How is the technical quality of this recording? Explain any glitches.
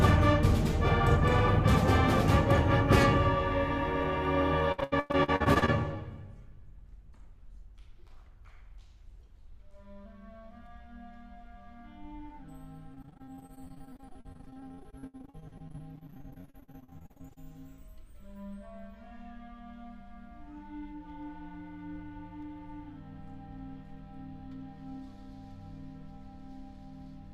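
The recording has two stretches of repeated packet loss (robotic sound), from 4.72 to 5.70 s and from 12.94 to 17.38 s. Chunks of audio kept failing to arrive. Each hole was bridged by stretching the last sound received. About 45% of the first stretch and 37% of the second are filled this way, with gaps up to 100 ms and 67 ms. The result is choppy audio with pieces missing.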